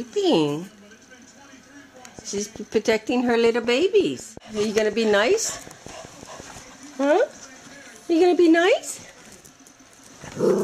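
From 2.19 s to 6.41 s a train of clicks runs over the sound, about twenty pulses at a steady 5.5 per second, reaching roughly the level of the program itself. The even spacing and repeated shape point to likely interference or a faulty connection injecting pulses, heard as regular ticking throughout.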